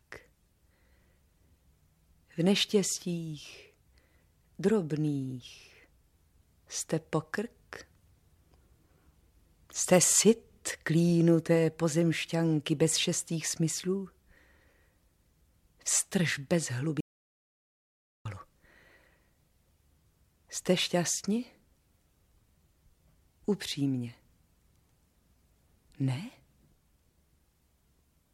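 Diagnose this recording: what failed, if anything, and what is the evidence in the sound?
An audio dropout to silence runs from 17.01 to 18.25 s: about 1.25 s of silence with no room tone, likely an input or device link loss while recording continued.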